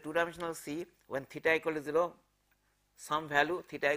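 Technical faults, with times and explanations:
No technical faults can be heard anywhere in the signal.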